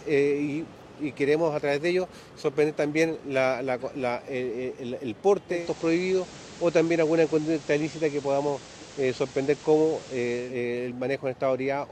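At 5.46 s the audio does a digital radio blend to analogue. The receiver loses the digital stream and cross-fades over about 245 ms to the station's FM signal. You hear a hiss floor come up around 20 dB under the programme, and the level shift by about 1 dB. It stays on FM until 10.59 s, then blends back to the cleaner digital sound.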